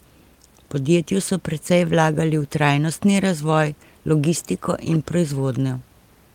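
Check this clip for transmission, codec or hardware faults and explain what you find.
No transmission, codec or hardware fault can be heard in this speech clip. The only background is the room noise around the microphone, sitting about 37 dB below the speech, which belongs to the recording itself.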